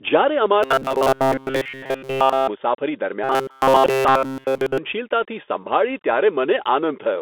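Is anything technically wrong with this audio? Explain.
Yes. Robotic sound from repeated short buffers appears twice, from 0.63 to 2.48 s and from 3.24 to 4.78 s. The speech becomes a rigid, metallic buzz fixed at 133 Hz. It follows the original speech only roughly. The likely cause is audio arriving too seldom, so a segment of about 7.5 ms is looped to fill each gap. In the first stretch most of the sound is repeated. In the second, all of it is.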